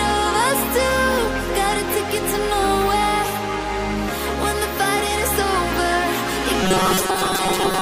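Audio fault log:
6.63 to 7.81 s, robotic sound from repeated short buffers: the last stretch turns into a stiff, metallic buzz pitched at 188 Hz, holding that tone to the end of the clip. It's likely that audio was arriving too slowly and the playback side kept looping a tiny chunk, around 5.3 ms, to fill the gaps, so most of the real signal in that span gets skipped and that fixed repeat rate is what you hear as the drone.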